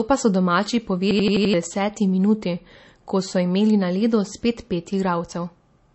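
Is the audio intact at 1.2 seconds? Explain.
No. From 1.11 to 1.54 s, right after "pa so domači" and before "deseti minuti," there's a system hang loop. The machine or its driver froze while the sound hardware kept replaying the same ring buffer, so one 85 ms slice of audio repeats five times at about 11.7 Hz. That gives a machine-gun stutter, and the length fits a 4096-sample buffer. Roughly 0.4 s of the real audio never makes it through.

On top of that, the whole clip, including this moment, has nothing above 8 kHz, and the smeary, swirly coding artefacts of a low-bitrate MP3 are present throughout. That points to low-bitrate audio saved at a high bitrate, likely a 32 kbit/s MP3 re-encoded at 192 kbit/s. The bigger file can't bring back the top end or clean up the damage from the first pass.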